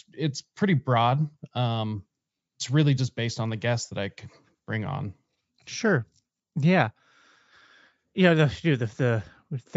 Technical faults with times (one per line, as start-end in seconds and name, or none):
none